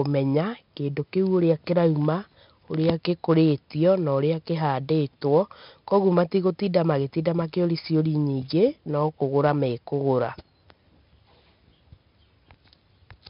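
Speech with 4-bit ADPCM compression throughout. Gritty hiss rides every loud syllable, heavily. Nothing sits above 5.3 kHz, pointing to a low-rate stream near 44 kbps.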